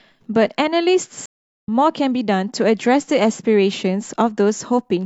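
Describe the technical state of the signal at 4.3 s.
At 4.3 s the speech signal is intact, with no dropout, distortion or other fault to be heard at that point.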